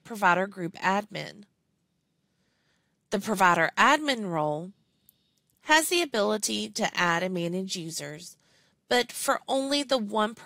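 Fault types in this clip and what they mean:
No technical fault can be heard anywhere in this clip. There is nothing to list or describe.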